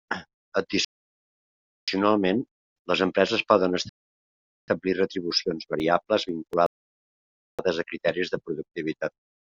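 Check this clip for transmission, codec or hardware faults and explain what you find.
Two kinds of fault are present in this speech: three rebuffering stalls and a short burst of CD scratch ticks.

Rebuffering stalls at 0.85 to 1.88 s, 3.89 to 4.68 s (after "les empreses poden"), and 6.66 to 7.59 s (just before "a criteris de"). The player drained its downloaded audio and waited for more, so the speech drops to silence and then picks up exactly where it left off. No speech is lost, but each pause stretches the clip, by about 1.03 s, 0.79 s and 0.92 s respectively.

CD scratch ticks from 5.31 to 6.53 s, shortly before "a criteris de". A blemish on the disc spoils more data than error correction can rebuild, once per revolution, so the player patches or mutes those samples. Six ticks of uneven strength, the longest about 3 ms, recur roughly five times a second.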